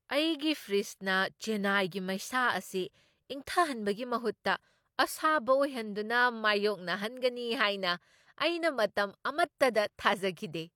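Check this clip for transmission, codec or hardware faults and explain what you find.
Two spots of pre-echo show up. At 1.90 s and again from 9.58 to 9.60 s, a brief hiss runs ahead of a sharp speech attack, about 12 ms and 22 ms long, because the codec spread its block noise into the quiet moment before the onset.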